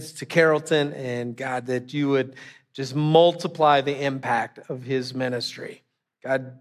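Nothing in the way of technical faults turns up anywhere in this bit of speech, so there's really nothing to flag here.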